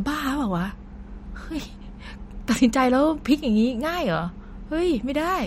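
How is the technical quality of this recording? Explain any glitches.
The technical quality is compromised by audible MP3 compression damage across the whole speech clip. From start to finish the sound has a watery, swirling texture, with metallic chirps on s sounds, and nothing is present above 16 kHz. This is likely MP3 encoding at a low bitrate, around 48 kbps. Short of bits, the encoder cuts the treble at a fixed point and drops quieter frequency components that flicker between frames. That flicker distinguishes it from a plain low-pass filter, which dulls the sound without the swirl.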